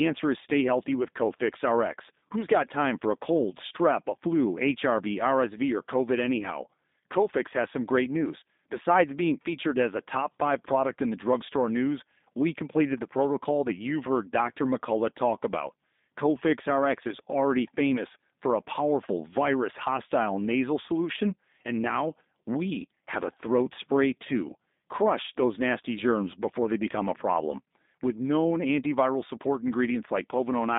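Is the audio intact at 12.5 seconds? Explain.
No, at 12.5 seconds you're hearing G.729 codec damage, which runs through the whole clip. The speech is rebuilt from a vocal tract filter plus a few pulses per frame, so it comes across rough and synthetic, capped around 3.8 kHz, which fits an 8 kbit/s codec.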